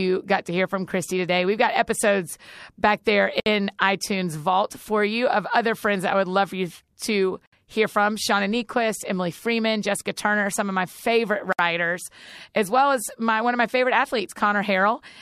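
At 3.40, 7.46 and 11.53 s the speech falls silent for about 61, 64 and 64 ms, a gap at a join of encoded pieces. The audio was encoded in separate 4-second pieces and joined untrimmed, so each piece's encoder start delay and final-frame padding remain. The codec smears the edges, so the silent part is shorter than the full gap. Unlike packet-loss dropouts, the gaps recur at a regular interval of about 4 seconds and the speech resumes exactly where it stopped, with nothing missing.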